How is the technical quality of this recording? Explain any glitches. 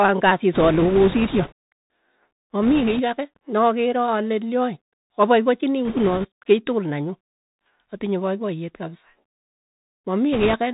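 The technical quality is poor. The speech has passed through a narrowband Bluetooth headset link, and four bursts of transmission damage are audible on top of that.

Bluetooth CVSD headset codec, throughout: the audio was coded one bit per sample as up/down steps, consistent with 64 kbps CVSD, so nothing above 4 kHz survives. S sounds turn scratchy, and granular hiss sits underneath.

Bit errors on a Bluetooth voice link, at 0.53–1.52 s, 2.63–3.01 s, 5.85–6.27 s (just before "kei tukul nenyu") and 10.33–10.55 s: a few percent of bits flipped. Since each bit nudges the waveform only slightly, this produces a rushing, crackly noise rather than loud clicks.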